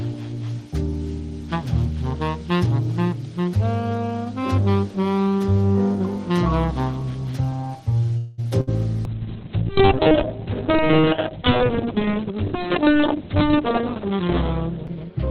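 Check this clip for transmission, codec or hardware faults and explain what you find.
Four distinct transmission faults occur, all clustered in the second half of the clip.

From 8.17 to 8.43 s there is a call audio freeze. The last sound is held and trails off as a fading buzz for about 205 ms, then the audio resumes exactly where it stopped, with nothing skipped. The likely cause is packets delayed in transit, leaving the jitter buffer empty so the receiver had to extrapolate until they arrived. The net effect is a gap inserted into the timeline and a matching increase in delay.

From 8.61 to 8.69 s comes a burst of packet loss. Consecutive packets went missing, and the receiver bridged roughly 64 ms by continuing the preceding sound at decreasing level, heard as a short fading buzz or hiss. Unlike the freeze, the audio picks up further along, so about 60 ms of content is simply gone.

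From 9.06 s to the end of the clip there is a call bitrate drop. The bandwidth estimate fell and the Opus encoder went from 32 kbps down to 6 kbps, holding the lowest rate for about 5.3 s. At that rate the coded bandwidth shrinks from 20 kHz to 4 kHz, so the sound becomes muffled and loses its top end. Coarse quantisation adds a rough, watery texture, and no recovery occurs before the clip ends.

From 12.05 to 12.49 s there is a jitter buffer speed-up. The buffer held more audio than its target, so the receiver trimmed out short pitch-period-length segments repeatedly, removing a few tens of milliseconds in total. Playback runs at about 107% of normal rate over that stretch while pitch stays unchanged. The passage sounds slightly hurried and compressed in time, on top of the already degraded low-bitrate quality.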